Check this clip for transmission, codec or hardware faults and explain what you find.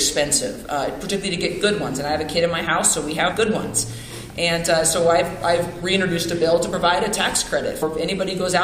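Two brief codec faults stand out. Damaged data in a compressed stream occurs at 3.31 to 3.33 s and again at 7.81 s: corrupted bytes make the decoder misread those frames and lose sync until it finds the next frame header, leaving a short blip each time.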